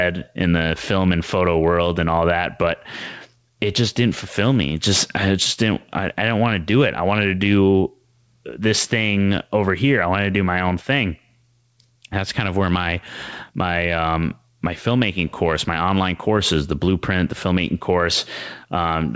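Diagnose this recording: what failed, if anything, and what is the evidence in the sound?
The fault is gain pumping, present from start to finish of the speech: loud and soft parts sit closer in level and the sound is squashed, with a level swing of roughly 5 dB. The likely cause is input gain set far too high, with a fast limiter or compressor in the level-control stage pulling it back on each peak. On a waveform the envelope looks squashed, peaks flattened to a near-uniform height. The hard 8 kHz ceiling comes from the G.722 call path.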